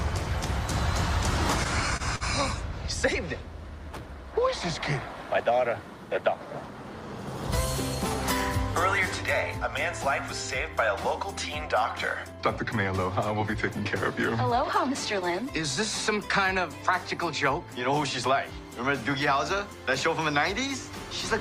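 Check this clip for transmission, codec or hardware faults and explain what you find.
Two kinds of network fault are present, both from uneven packet arrival. There are no codec or hardware faults.

Short stalls from a late packet occur at 1.97 to 2.03 s and 2.16 to 2.24 s. Packets arrived late, the jitter buffer ran dry, and the receiver stretched the last sound by 29 ms and then 48 ms before continuing. Nothing drops out, but the sound hangs briefly with a faint buzz or dip.

A jitter buffer speed-up runs from 5.07 to 5.51 s. With excess audio queued, the receiver trimmed short pitch-period slices repeatedly, about 40 ms in total. Playback runs at 107% speed with unchanged pitch, so this stretch sounds slightly rushed.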